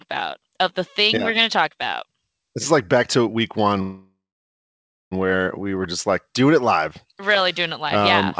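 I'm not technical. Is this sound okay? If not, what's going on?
No. There is a call audio freeze from 3.82 to 5.13 s, right after "like back to week". The speech stops and is filled for about 1.3 seconds. A short trailing sound fades out, and most of that time, about 0.93 s, is silent. Then the speech picks up exactly where it left off. Nothing is lost. It just arrives 1.3 seconds late. The likely cause is that parts of the call got held up in transit, so the receiving end ran out of audio to play.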